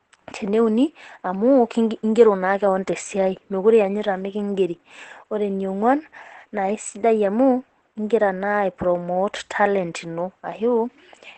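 Throughout the speech the sound is muffled and hoarse, with heavy codec damage. A spectrogram shows nothing above 8.3 kHz. This is likely Opus compression in its speech mode, at a rate around 12 kbps, which narrows the bandwidth and roughens the voice's texture.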